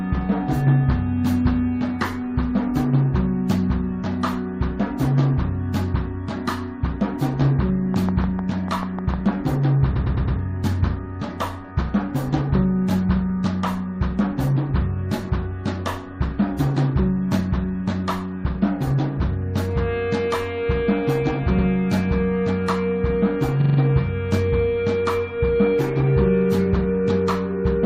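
From 7.94 to 9.30 s a regular train of clicks, roughly ten at 6.7 per second and about 10 dB above the sound, ticks through, likely from electrical interference. On a spectrogram they are evenly spaced thin vertical lines spanning all frequencies.

Repeated frames follow. At 9.95 to 10.38 s a 106.7 ms block plays four extra times, consistent with five codec frames. At 21.58 to 21.66 s an 85.3 ms block repeats once. At 23.60 to 23.77 s a 42.7 ms block replays four times. Each sounds like a stutter. In the waveform and spectrogram they show as identical patterns side by side, stretching the audio by about 0.43, 0.09 and 0.17 s.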